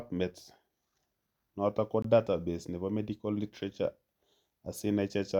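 At 2.02 to 2.04 s, right after "notok ko", there's a gap between stream segments: about 21 ms of hard-edged silence, consistent with a small timestamp gap between segments, before "database nebo medical literature" resumes.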